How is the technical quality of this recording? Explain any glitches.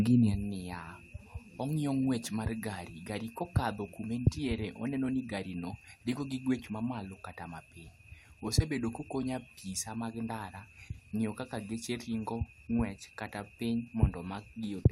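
No technical glitches can be heard in this recording.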